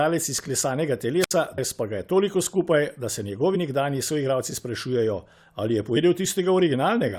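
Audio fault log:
1.20–1.31 s, wireless microphone squelch dropout: the radio signal fades, hiss rises briefly, then the receiver's squelch mutes the voice for about 67 ms before it returns.
1.57 s, 3.54–3.56 s and 5.96 s, damaged data in a compressed stream: corrupted frames make the decoder misread and lose sync while hunting for the next header, producing short chirps or blips.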